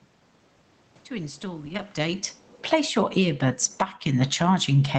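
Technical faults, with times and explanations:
1.65–1.83 s, lost packet rebuilt from error correction: Several Opus packets never arrived, and the decoder substituted the low-bitrate copies carried in the packets that followed them. About 100 ms of sound was rebuilt this way, so there is no gap, but that stretch sounds rougher and noisier than its surroundings.
1.97–2.94 s, automatic gain falling: The automatic gain control judged the input too loud, perhaps after the talker moved around 1.5 s, and eased its gain down by about 13 dB. The sound and the room noise behind it sink together over roughly a second.
2.87–4.98 s, automatic gain rising: The gain control found the input too quiet and began raising its gain again. The sound and its background swell back up together, gradually, through to the end of the clip.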